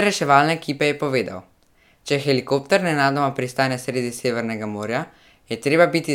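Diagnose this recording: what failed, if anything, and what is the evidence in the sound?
Nothing failed: the sound of this recording gives no evidence of a fault at any stage.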